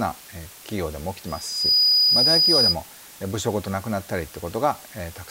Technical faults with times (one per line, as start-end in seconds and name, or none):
0.00-5.31 low bit depth with dither
1.27-2.76 loudspeaker feedback squeal